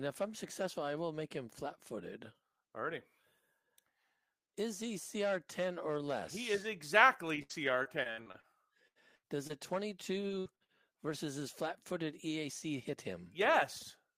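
Speech, and the network clearly had a rough patch. From 7.43 to 8.46 s there's repeated packet loss (robotic sound): seven dropouts in quick succession, the longest 69 ms, with about a quarter of that stretch patched by continuing the previous sound. That gives it a choppy sound with bits of speech chewed out. The same thing returns from 10.27 to 10.71 s, just before "versus his", with four gaps up to 61 ms. Concealment covers nearly 40% of that span. Between those, two bursts of packet loss hit at 8.87–8.98 s and 9.15–9.26 s. Each drops about 80 ms, which the receiver bridges by stretching the last sound and fading it, so you get a held buzz or fading hiss and then the speech jumps ahead with a chunk missing. Around 9.47–9.52 s there's a short concealed packet loss, only 20 ms, heard as a brief smear or wobble where the decoder extrapolated and blended back in. Overlapping it, at 9.49–9.51 s, a lost packet was rebuilt from error correction. 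The low-bitrate Opus in-band copy fills the hole without a gap but sounds rougher and noisier for that instant.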